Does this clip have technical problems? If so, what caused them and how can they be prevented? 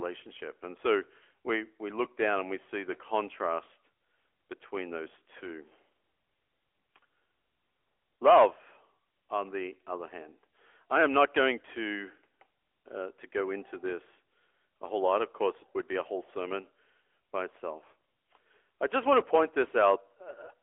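Yes, the whole clip has been through the AMR narrowband mobile codec. Nothing above about 3.5 kHz survives, and the band sits roughly between 300 Hz and 3.4 kHz, so the speech sounds boxed-in and phone-like. The codec rebuilds the voice from a vocal-tract model fed by sparse pulses, which leaves a plainly audible buzzy, synthetic edge that fits a mid-rate mode around 10.2 kbps. To prevent it, record locally or use a wideband path instead of a mobile call.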